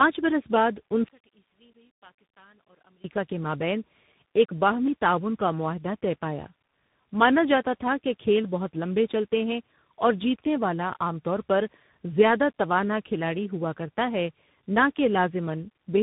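Speech that sounds rough, muffled and warbly from start to finish, with nothing above about 3.8 kHz. This is tandem speech coding: the call was decoded and re-encoded at each network boundary, and each coder worked on the previous one's damage. The grainy texture and smearing fit three different speech codecs in a row, such as CVSD feeding G.711 mu-law and a low-rate G.729A stage before returning through G.711 and CVSD. From 1.09 s to 3.04 s, between "برس بعد" and "کے مابین", the speech drops by about 23 dB to a faint residue. The likely cause is one channel inverted: one stereo channel had reversed polarity, so the shared centre content cancelled when the two channels were summed to mono, leaving only their small differences.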